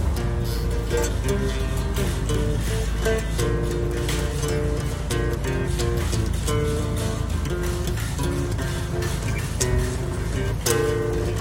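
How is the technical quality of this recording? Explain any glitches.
Nothing in here snags the ear at all; there isn't a single glitch to point to anywhere in the recording.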